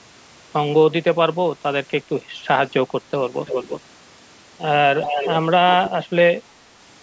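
At 2.03 to 2.09 s the speech dips slightly for a brief moment. This sounds like speech suppressed in double talk. The likely cause is an echo canceller that heard both sides at once. It could not tell its own talker from the loudspeaker echo, so it turned everything down.

At 3.46 to 3.81 s and again at 5.02 to 5.36 s, a delayed copy of the voice comes back. It trails the original by 332 ms. It is only a little quieter than the speech itself. This is echo leak. The far end likely plays the call on a loudspeaker, and its canceller let part of that pickup through. A third, much fainter scrap follows at 5.73 to 5.9 s, with the same delay.

Right after, from 5.91 to 6.42 s, the speech is suppressed in double talk again. This time the cut is deep. The voice nearly vanishes for roughly 400 ms.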